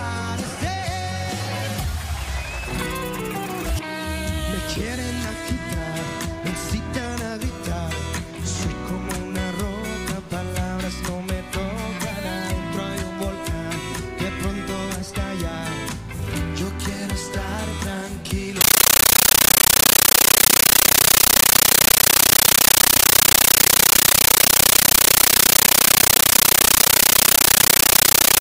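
From 18.61 s to the end at 28.40 s, the sound is replaced by very loud chattering static: a compressed stream played as audio. Bursts of noise about 13.3 ms long repeat at 31.25 Hz with silent padding between them, which fits an undecoded AC-3 bitstream passed through as PCM.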